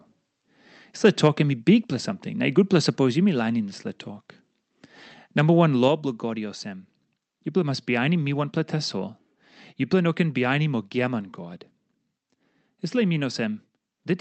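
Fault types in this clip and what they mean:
microphone overload: From 1.05 to 1.28 s the loudest peaks flatten into a harsh crackle, likely from input gain driving the converter about 2 dB past full scale. The waveform shows squared-off tops on under one percent of samples, and the spectrogram shows broadband smearing at those instants.
microphone volume stepped down: At 5.88 s the speech and background drop together by about 5 dB in one step, likely an automatic cut to the device's input volume. On the waveform the envelope shrinks abruptly, and the spectrogram darkens evenly across all frequencies from that point.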